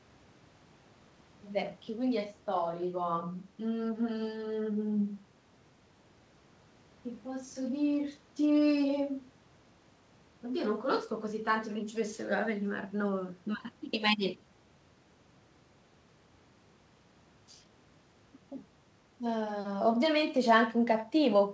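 No faults can be heard.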